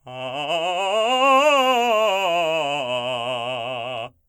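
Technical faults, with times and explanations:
No technical faults are present in this music clip; the signal remains intact and continuous, with nothing in the recording or playback chain audibly disturbing it.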